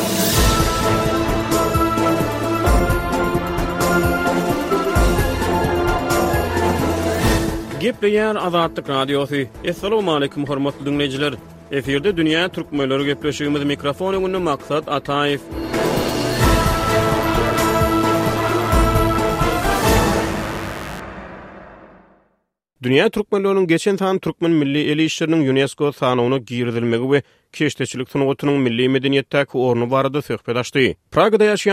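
From 15.77 to 21.00 s, interference from the 50 Hz mains supply gets into the signal path, most likely through a dimmer, a rectifier or a gap in shielding. Sharp spikes arrive twice per mains cycle, so harmonics of 50 Hz stack up into the kilohertz range. The result is mains buzz: a steady, raspy tone sitting roughly 15 dB below the wanted sound, lasting about five seconds before it stops.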